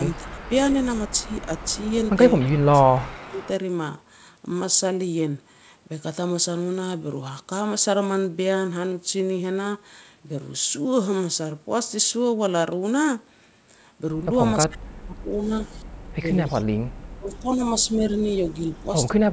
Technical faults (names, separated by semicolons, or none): speech suppressed in double talk; echo leak